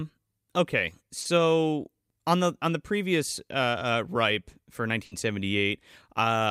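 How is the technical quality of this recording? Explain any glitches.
The speech has two brief dropouts where packets went missing and the receiver covered the gaps.

At 1.21 to 1.27 s there is a short smear where the sound wobbles briefly. This is short concealed packet loss: about 40 ms never arrived, and the decoder extended the preceding sound before blending back.

At 5.05 to 5.13 s, just after "uh ripe for", the sound turns into a held, fading tail. This is a burst of packet loss: about 60 ms was lost, the decoder stretched the last sound while lowering it, and the audio resumes with that stretch missing.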